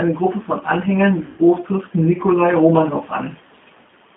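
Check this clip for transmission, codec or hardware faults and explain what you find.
Two faults are audible: a low-bitrate speech codec throughout, and one dropout concealed by that codec.

G.729 codec, throughout: the speech is rebuilt from a vocal tract model, pitch predictor and sparse pulses, consistent with an 8 kbit/s G.729A stream. Within a 200 Hz to 3.5 kHz band, it sounds plainly rough, slightly synthetic and thin.

VoIP packet loss concealed by the speech codec, 1.26 to 1.42 s: about 120 ms of audio went missing, which fits six lost packets. The decoder stretched its last pitch and filter with falling gain, so the speech smears into a buzzy tone or coloured noise that fades, and stays weak briefly after recovery.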